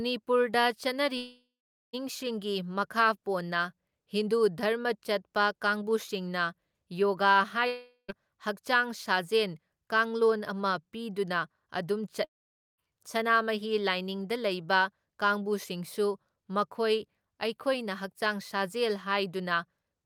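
A likely long network dropout loses about 0.76, 0.42 and 0.54 s of speech at 1.17, 7.67 and 12.24 s; each gap becomes a fading buzz or hiss, then silence.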